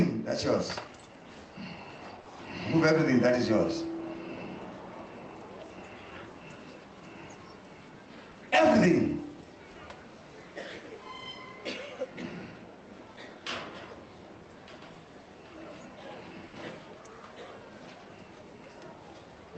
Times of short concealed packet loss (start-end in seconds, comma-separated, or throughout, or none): 2.21-2.27, 8.31-8.37, 14.93-14.97